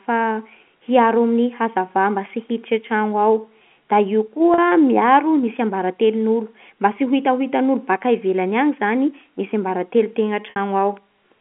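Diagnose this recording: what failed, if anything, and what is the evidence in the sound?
Network packet loss with pitch repetition: concealment looped the last pitch period, producing a brief held, buzzy tone at 4.54 s (40 ms), and at 10.5 s (60 ms) a repeat that fades into silence before speech returns with a short cross-fade.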